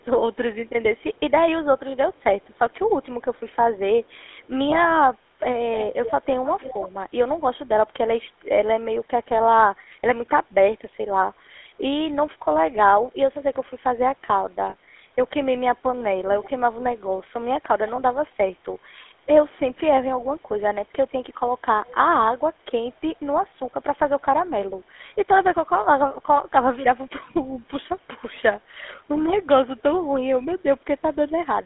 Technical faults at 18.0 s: GSM full-rate codec; lost GSM frames

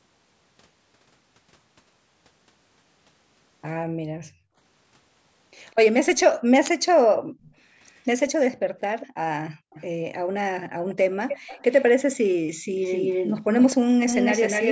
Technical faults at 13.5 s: echo leak

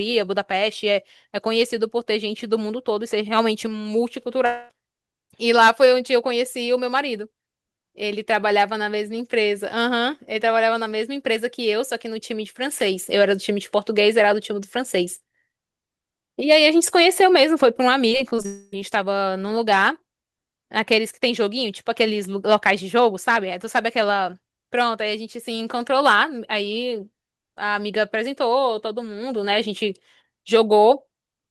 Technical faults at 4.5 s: long network dropout

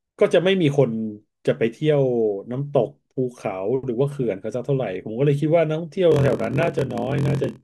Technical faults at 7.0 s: block size mismatch (padded)

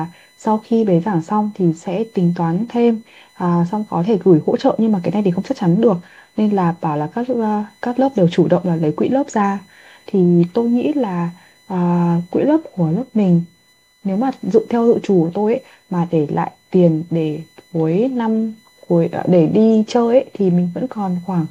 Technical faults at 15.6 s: USB whine

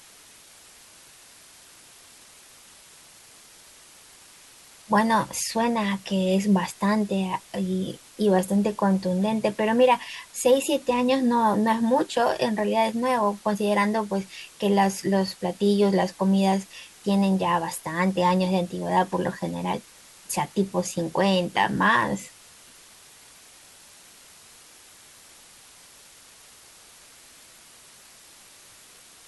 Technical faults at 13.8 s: low bit depth with dither

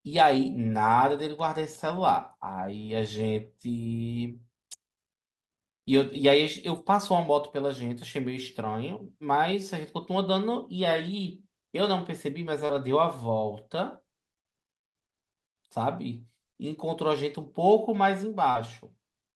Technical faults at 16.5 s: none

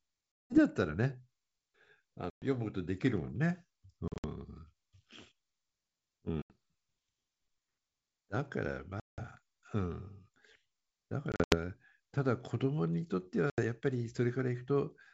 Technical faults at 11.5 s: packet loss on an ADPCM call

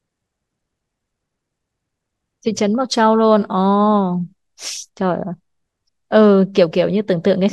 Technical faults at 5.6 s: none

